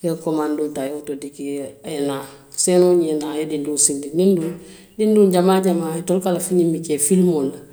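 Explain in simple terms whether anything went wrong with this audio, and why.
At 0.87 s the speech and background drop together in a sudden gain jump, likely a level setting applied without a fade, then snap back at 1.99 s.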